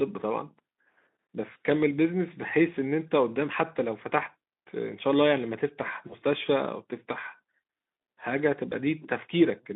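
At 1.53–1.56 s, 6.07–6.16 s and 8.70–8.73 s the speech shows VoIP packet loss concealed by the speech codec. Each gap fits a single lost 20 ms frame, which the decoder filled by extending its last pitch and filter at falling gain. Each gap sounds like a brief buzzy or noisy smear, and the speech stays weak or distorted until the decoder recovers. The Speex narrowband line at 15 kbps adds light codec damage throughout.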